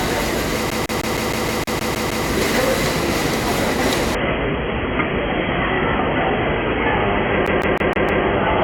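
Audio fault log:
0.70–2.26 s and 7.47–8.24 s, CD stuck on one turn: the same 0.16 s fragment of sound repeats, 10 times in the first run and 5 in the second, with a brief mute at each jump back. A scratch makes the pickup return one track on every rotation, so the loop length stays fixed and produces an even, machine-like stutter. The second run falls inside the reduced-quality stretch and carries its dulled top end.
4.15–8.63 s, adaptive stream at a lower bitrate: quality drops abruptly with no gap and does not recover before the end. Nothing is heard above 3.4 kHz, and codec artefacts become more prominent. The stream switched to a much lower-bitrate rendition, which points to a drop from roughly 96 kbit/s to about 16 kbit/s AAC. At that rate the encoder discards the upper band to meet its data budget, so the sound turns dull.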